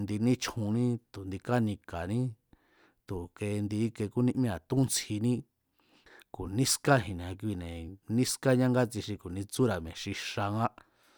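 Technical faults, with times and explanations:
The speech signal shows no technical faults at any point in the recording.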